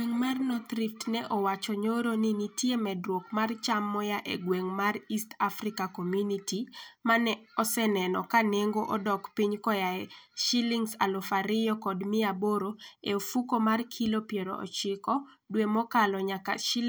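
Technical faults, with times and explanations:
Nothing stood out as a technical fault on listening to this speech recording.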